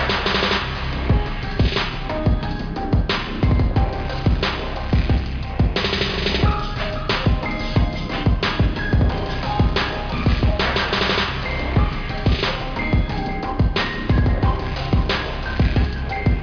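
No technical faults can be heard anywhere in this recording.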